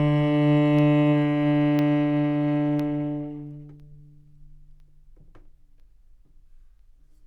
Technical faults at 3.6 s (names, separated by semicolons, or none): periodic USB or driver dropouts